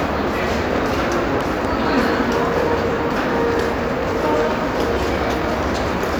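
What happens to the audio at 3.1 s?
Nothing goes wrong at 3.1 s; the sound plays through that moment intact, with no dropout, click, distortion or other fault.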